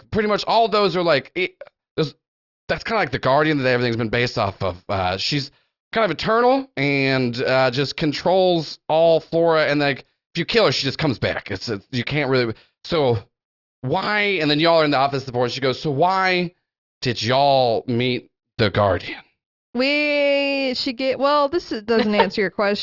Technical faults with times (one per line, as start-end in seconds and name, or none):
none